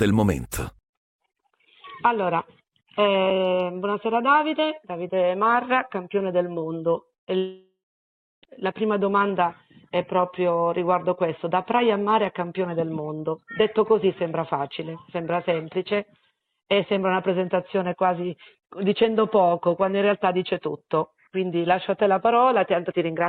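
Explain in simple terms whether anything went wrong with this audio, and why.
Two things went wrong, one right after the other.

From 7.07 to 7.32 s there is repeated packet loss, which gives a robotic sound. Small bits of audio went missing five times in a quarter of a second. Each hole was patched by stretching the sound just before it, so it turns choppy.

Then, from 7.38 to 8.56 s, the audio breaks off almost completely. This is likely a long network dropout, where nothing arrived for over a second. The last sound is stretched into a fading buzz, then about 0.7 s of silence follows. When the sound returns, that missing second is simply gone.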